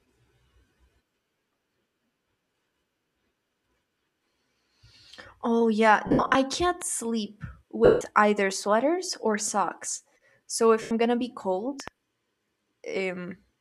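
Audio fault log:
6.07–10.91 s, lost LE Audio frames: three gaps where the sound turns into a smeared, noisy hiss instead of cutting to silence. At 6.07–6.35 s, just before "can't sleep", about 210 ms goes missing in patches spread over 280 ms, the longest run around 70 ms. At 7.85–8.01 s, between "can't sleep" and "either sweaters or socks", 160 ms is lost. At 10.82–10.91 s, before "gonna be cold", 90 ms is lost. Each gap is bridged by repeating the last spectrum with scrambled phase, which fits the codec's 10 ms frames. That repeated spectrum, fading as it goes, is what sets these apart from a clean dropout.
6.82 s and 11.80–11.90 s, loud pop: a single sharp click at 6.82 s, about 5 dB above the signal, and a double pop at 11.80–11.90 s, about 10 dB above it. The cause is likely a voltage step, such as a switch, static or driver glitch, added on top of the signal. The speech carries on intact beneath each pop, with nothing missing or smeared. 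That is what distinguishes these pops from the frame losses.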